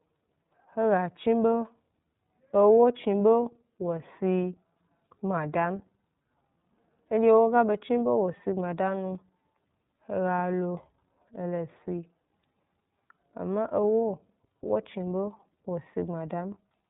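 From start to end, the speech carries plainly audible iLBC codec damage. Nothing passes above 3.8 kHz, so a spectrogram shows an empty band over that line. Independently coded frames, which fits 30 ms framing, leave a rough, slightly synthetic texture.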